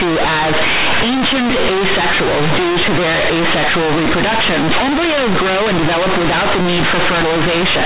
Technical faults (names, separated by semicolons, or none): companded audio read as linear